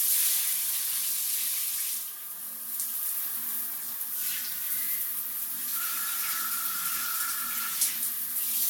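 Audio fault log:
throughout: generation loss. The sound is swirly, smeared and hollow, transients blur, and nothing remains above 17 kHz. This likely comes from around four rounds of lossy decoding and re-encoding, fitting AAC-LC near 96 kbit/s, each pass re-quantising on a shifted frame grid so noise and spectral gaps accumulate.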